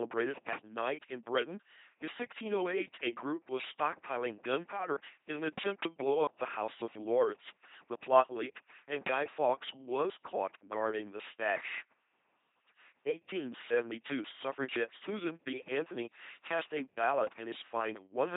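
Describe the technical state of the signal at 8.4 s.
At 8.4 s you're hearing the LPC-10 vocoder, which runs through the whole clip, so this moment is no exception. The speech gets rebuilt from a small all-pole filter standing in for the vocal tract, excited by either a pulse train or noise, with each instant treated as fully voiced or fully unvoiced. That's why it comes out as a buzzy, mechanical robot voice, heavily damaged, with nothing above 3.8 kHz, which fits a 2.4 kbit/s rate.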